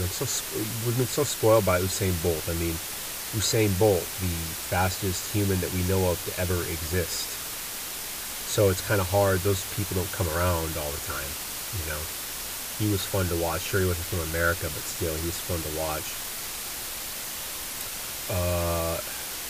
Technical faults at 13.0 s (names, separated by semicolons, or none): low bit depth with dither